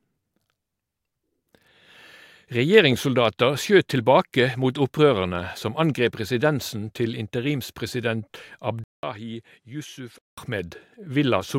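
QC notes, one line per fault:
8.84–10.38 s input likely switched to a poorer device: 0.19 s gap, nothing above 12.7 kHz, about 10 dB quieter, faint new noise floor, unlike plain filtering.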